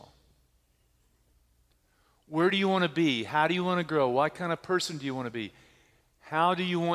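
Nothing in this speech recording stands out as a technical fault; there's nothing here to flag at any point along the way.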